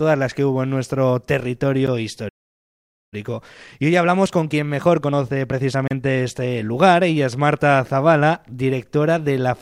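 At 1.87 s the sound drops out for about 11 ms, a gap at a join of encoded pieces. Two separately encoded segments were butted together without trimming, so the encoder's start-up delay and last-frame padding survive as a sliver of silence. The edges are smeared, and the sound resumes exactly where it left off. That brevity separates it from the stall that follows.

From 2.28 s to 3.14 s the output goes silent for about 830 ms, a playback stall. The player most likely ran short of data or had its output thread blocked, so it simply stopped feeding the device. This break is far longer than a join gap.

From 3.14 s to 6.17 s the player works off the backlog through time-compressed catch-up. It plays about 1.1 times faster by cutting out small chunks and cross-fading across them. Pitch stays normal, which distinguishes this from simply running the clock fast. What you hear is a hurried pace.

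Inside that stretch, at 5.88 to 5.91 s, a second join gap of about 32 ms appears. It falls 4 s after the first, which fits a stream assembled from 4-second encoded segments.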